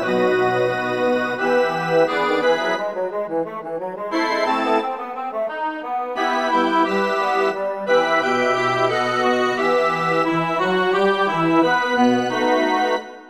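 Nothing stood out as a technical fault on listening to this recording.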